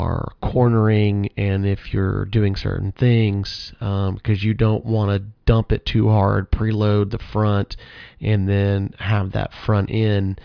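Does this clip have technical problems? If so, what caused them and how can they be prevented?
No, the speech signal shows no technical faults at any point, so there is nothing here that needs preventing.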